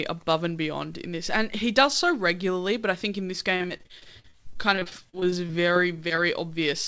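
From 3.56 s to 6.19 s, right after "I think in this", the speech breaks up with repeated packet loss (robotic sound). About two dozen short dropouts, none longer than 43 ms, are each patched by stretching the preceding sound, so roughly a fifth of the stretch is filler. It sounds choppy, with pieces missing. On a waveform the envelope turns jagged with repeated chunks; a spectrogram shows smeared, stuttering harmonics, all capped at 8 kHz, which fits a G.722 call link.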